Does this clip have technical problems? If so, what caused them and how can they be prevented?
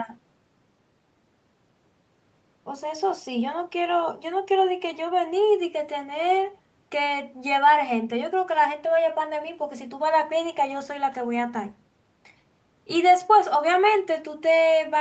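No technical faults are audible.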